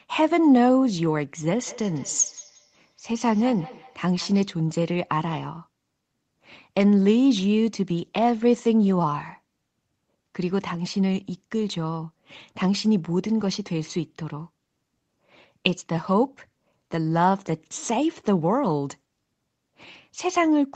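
Feedback echo between two devices, 1.67 to 4.54 s: another device replays the speech into this microphone, so it returns roughly every 200 ms, thin and ringing, about 20 dB down.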